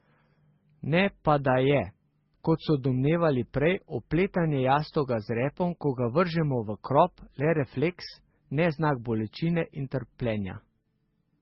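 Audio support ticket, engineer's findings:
Speech band-limited throughout, nothing above 5.7 kHz, with two layers of coding smear. Likely transcoding between lossy codecs, consistent with low-rate MP3 re-encoded to Opus.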